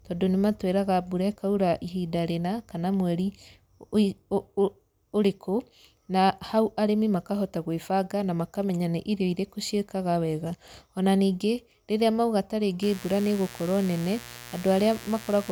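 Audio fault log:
12.82–15.52 s, mains buzz: after "ningĩ rĩrĩa mauga", a steady raspy buzz about 20 dB below the speech. Switching spikes repeat twice in every 60 Hz cycle, with harmonics into kilohertz.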